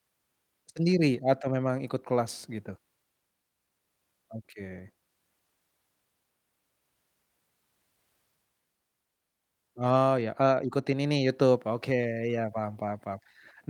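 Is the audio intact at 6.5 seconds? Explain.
Yes, the speech at 6.5 seconds is intact, with no dropout, click, distortion or other fault at that moment.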